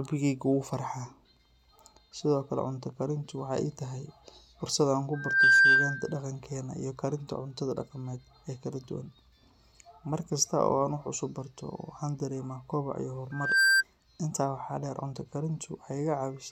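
Speech with loudspeaker feedback squeal: a 1.6 kHz tone swells within a fraction of a second at 5.13–6.20 s and after "koboc iyo" at 13.31–13.83 s, well above the speech, as the microphone–loudspeaker loop gain exceeds one.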